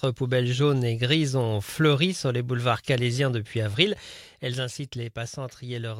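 From 3.66 to 4.38 s there is zipper noise. The level drops by roughly 10 dB, but in coarse steps with no smoothing. Each step clicks. About fifty small ticks a second ride on the sound, heard as a brief zipping while the level falls.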